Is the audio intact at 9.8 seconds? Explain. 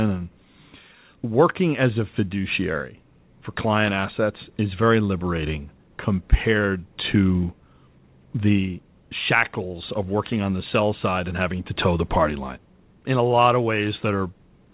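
Yes, the audio is intact at 9.8 seconds: the speech carries through without any fault, with only the narrow telephone-style band of the call path, which leaves nothing above 4 kHz.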